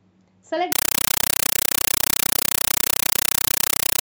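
From 0.72 s to the end, the speech gives way to a compressed stream played as audio: AC-3 data is being treated as ordinary samples instead of being decoded. It sounds like harsh, very loud chattering static. Each 8 ms burst of noise is followed by silence, repeating at 31.25 per second, a density that fits a 384 kbps stream. The waveform shows dense blocks separated by flat, near-silent gaps, and the spectrogram shows broadband vertical stripes.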